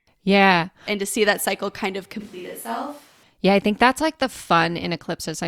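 From 2.21 to 3.23 s the speech abruptly turns roomy and hollow, thinner in the bass and about 5 dB quieter, with background noise sitting only about 25 dB below the voice. That is a switch to a distant microphone, likely because the close microphone's feed dropped out. On the waveform the envelope steps down and the gaps fill with a raised noise floor; the spectrogram shows weakened low frequencies and smeared, reverberant tails until the sudden return.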